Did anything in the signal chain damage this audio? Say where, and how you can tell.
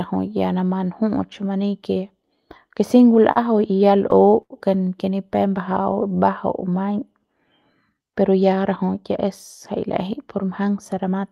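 Yes. Short stall from a late packet at 3.31 s: the network delivered a packet late, and the jitter buffer ran dry, so one sound is held about 42 ms too long.

Repeated stalls (stutter) from 4.11 to 4.52 s: four late-packet gaps, the longest 84 ms, were filled by stretching earlier sound. Nothing is lost, but the speech drags.

Jitter buffer slow-down from 5.27 to 7.20 s and from 7.94 to 8.16 s: repeated pitch periods play the speech at 92% and then 84% speed, with pitch unchanged.

Jitter buffer speed-up from 10.04 to 11.19 s: the buffer held too much audio, so short pitch-period slices, about 70 ms in total, were dropped. The speech runs about 5% fast and sounds hurried.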